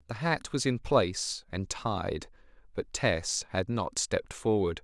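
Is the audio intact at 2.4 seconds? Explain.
No. At 2.36 s there is a dropped buffer (overrun): roughly 10 ms of speech is missing, likely because the samples were overwritten before being read. The two sides join directly with no gap, producing a small skip forward.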